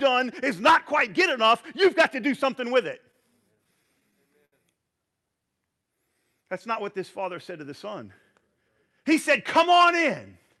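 Speech carried over a call path whose high end stops near 12 kHz, consistent with a WebRTC codec such as Opus. After "do something with it", from 3.11 to 4.54 s, repeated stalls (stutter) occur: eight gaps totalling 137 ms, the longest 70 ms, are filled by continuing the preceding sound while the jitter buffer sits empty, so the speech drags but loses nothing. From 5.67 to 6.45 s a jitter buffer slow-down repeats pitch periods to rebuild its reserve, adding 64 ms and running the speech at 93% speed with unchanged pitch. After "said to the son", from 8.54 to 9.77 s, a jitter buffer speed-up cuts short pitch-period pieces to shed excess delay, removing about a tenth of a second and pushing delivery to 107%, which sounds hurried.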